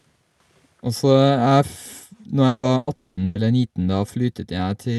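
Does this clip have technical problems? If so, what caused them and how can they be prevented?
Yes. The speech is broken up by several packet-loss faults clustered between 2.47 and 3.38 s.

Long network dropout: From 2.47 to 2.66 s and again from 2.95 to 3.20 s, the sound is replaced by a held buzz or hiss that fades away. The first fill lasts about 160 ms, the second about 220 ms. The audio never falls fully silent. When it returns, the stretch underneath is gone. The likely cause is a brief break in the network link, long enough that the receiver could only stretch out the last sound. A more stable connection, such as wired instead of congested Wi-Fi, would prevent this.

Burst of packet loss: From 2.77 to 2.90 s and from 3.25 to 3.38 s, roughly 100 ms of audio goes missing each time. The receiver carries the last sound forward and lowers it as the gap continues, so it comes out as a short fading buzz or hiss. 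Speech then resumes further along, without the skipped part. Each burst lasted longer than a single packet. Reducing network congestion, or using a slightly deeper jitter buffer, would prevent this.

Lost packet rebuilt from error correction: Single 20 ms frames at 2.63, 2.87, 3.17 and 3.35 s sound rougher and noisier than their neighbours. There is no gap at these points. Each lost packet was rebuilt from a low-quality copy carried in the next one, which is Opus in-band forward error correction. This happens inside the Opus call path, whose top end stops at 12 kHz and whose coding points to about 64 kbps. Avoiding the underlying packet loss would prevent this.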